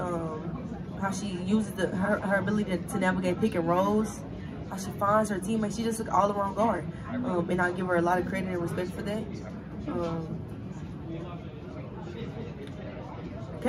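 No technical faults can be heard anywhere in this audio.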